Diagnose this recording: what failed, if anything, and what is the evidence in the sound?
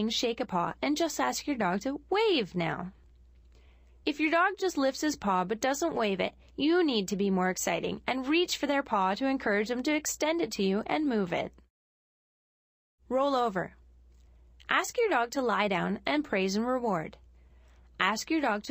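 No fault found in this recording.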